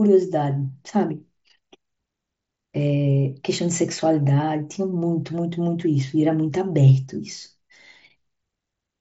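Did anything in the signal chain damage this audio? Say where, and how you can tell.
No, nothing in the chain damaged this speech; it has come through a Bluetooth mSBC headset link working as intended, which accounts for the band ending near 7.7 kHz and the light graininess on louder passages.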